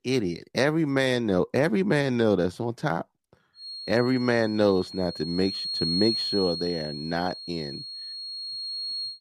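From about 3.52 s to the end at 9.21 s there's a feedback whistle, a thin steady tone near 4.3 kHz sitting maybe 10 dB under the speech and slowly swelling and fading. It's likely a speaker-to-mic loop hovering right at the edge of feedback without running away.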